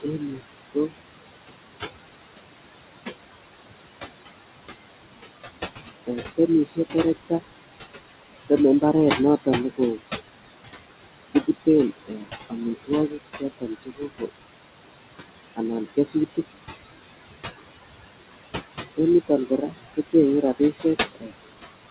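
A DECT cordless phone buzz runs through the whole recording. A nearby handset or base transmits a short radio burst every 10 ms, the audio circuitry rectifies it, and the result is a thin, steady 100 Hz buzz rich in harmonics, sitting roughly 20 dB below the speech.

Noise suppressor artifacts are also present throughout. The suppressor estimates steady noise per frequency band and pulls it down by about 15 dB frame by frame, so the room noise, about 9 dB below the speech, drops away in pauses and swells back under speech.

From 0.01 s to 21.9 s the suppressor also cuts speech, treating quiet speech energy as noise. At the deepest point the drop reaches about 21 dB, so soft consonants, word endings and quieter phrases sound swallowed or faint. The call path's band limit, with nothing above 4 kHz, fits a 64 kbps G.711 mu-law codec.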